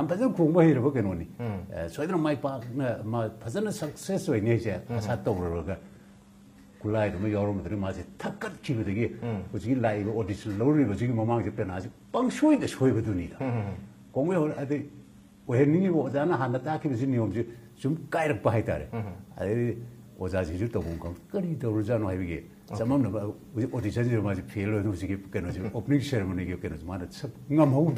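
From 5.53 to 17.53 s the adaptive stream drops to a lower bitrate: the top end vanishes above 12.3 kHz and codec artefacts rise, consistent with roughly 16 kbit/s HE-AAC, then snaps back without a gap.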